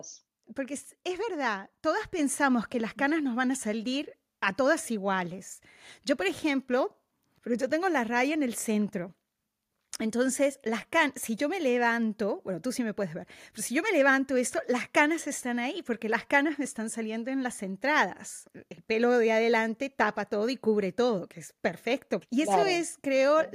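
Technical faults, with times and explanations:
2.19 s, microphone volume stepped up: the speech and the room noise behind it jump louder together in one abrupt step of about 5 dB. The call software judged the microphone too quiet and raised the device's input volume at once.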